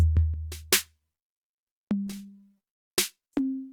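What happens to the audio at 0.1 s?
Nothing goes wrong at 0.1 s; the music plays through that moment intact, with no dropout, click or distortion.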